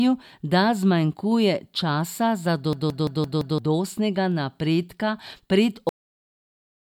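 At 2.73 s, just after "da zmanjkuje časa za", a system hang loop occurs: the machine froze while the hardware kept replaying one 170.67 ms piece, which fits an 8192-sample buffer. The speech stutters at 5.86 Hz until 3.58 s, and about a second of audio is lost. At 5.89 s, after "napredka pred", a cut-off end occurs: the final buffers never played, so the speech stops abruptly into digital silence with no decay.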